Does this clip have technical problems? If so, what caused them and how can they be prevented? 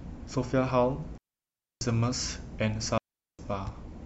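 Yes. Digital wireless dropouts at 1.18 to 1.81 s and 2.98 to 3.39 s: the receiver lost too much data and muted quickly, leaving clean near-silent holes of 634 ms and 410 ms with no noise bursts. Keep line of sight, shorten transmitter distance and avoid crowded frequencies.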